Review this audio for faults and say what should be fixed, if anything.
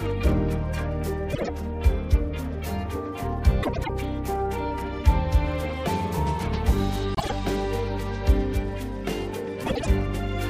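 Frames out of order at 1.33–1.49 s, 3.63–3.90 s, 7.15–7.32 s and 9.66–9.87 s: two adjacent runs of frames were decoded swapped, so each stretch plays with its halves exchanged, a garbled flutter. The swapped blocks are about 52, 104, 52 and 78 ms long. To prevent this, reorder packets by sequence number or timestamp in a jitter buffer before decoding.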